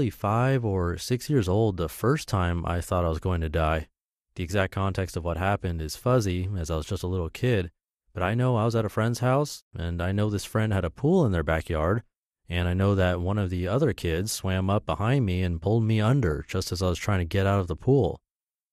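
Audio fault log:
throughout  MP2 compression: The speech sounds dull and closed-in, with a granular, gurgling roughness on every phrase. The top of the spectrum comes and goes as upper sub-bands are switched off when bits run short, and the bands that remain are coarsely quantised. The likely cause is MPEG Layer II coding at a low data rate, and the damage is plainly audible, which fits a bitrate around 80 kbps.
4.70; 16.13–16.32  DAB burbling: At 4.70 s, just before "context of what happened", a brief burble hits the sound, and from 16.13 to 16.32 s, between "me and pulled me" and "just as I was", a longer burble follows. Bit errors slipped past error correction into the coded data, roughly 0.1 and 0.07 percent of bits, corrupting samples so short blips of noise land in single sub-bands over what sounds like six to eight frames.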